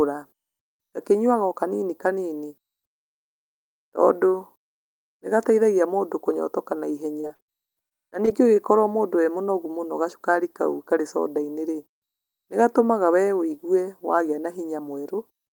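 Between 7.17 and 8.29 s the stream suffered repeated packet loss (robotic sound): data kept arriving late or not at all, and each short hole, the longest about 34 ms, was patched by stretching the preceding sound. The speech turns choppy, with fragments audibly missing.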